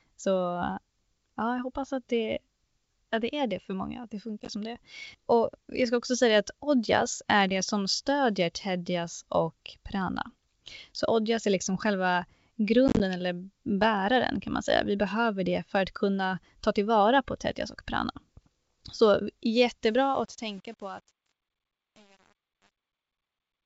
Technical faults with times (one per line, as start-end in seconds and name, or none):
4.40-4.50 packet loss on an ADPCM call
12.88-13.01 packet loss on an ADPCM call
19.85-23.66 truncation distortion on a fade